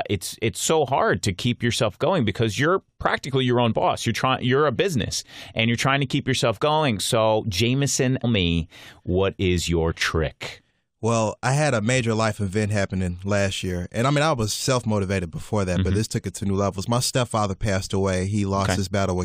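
At 8.23 s the speech is broken by a brief glitch lasting well under a tenth of a second. This is damaged data in a compressed stream. A short run of the encoded bytes is wrong at that point. The decoder cannot read the affected frame correctly and loses its place. It outputs garbled sound until it finds the next valid frame header and resumes normal decoding.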